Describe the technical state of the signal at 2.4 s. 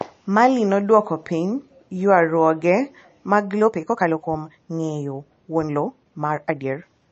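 At 2.4 s the speech carries MP3 compression damage, and that damage runs through the whole clip. It is plainly audible. Nothing is heard above about 8.3 kHz, where the encoder has cut the treble. Weak frequency components flicker in and out between frames. That gives a watery, swirly texture, and s sounds turn metallic. The likely cause is MP3 encoding starved of bits, which fits a low bitrate of around 34 kbps.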